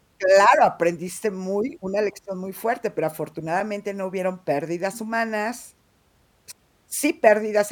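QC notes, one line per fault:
3.60 s, repeated buffer: fresh audio arrived late, so the device replayed its last block, a slice of about 1.45 ms that fits a 64-sample buffer, three extra times. Four identical copies meet at hard joins, giving a brief click-like buzz near 690 Hz rather than a stutter, with essentially no speech lost. The waveform shows one short shape repeating with step discontinuities. The spectrogram shows a thin vertical broadband stripe.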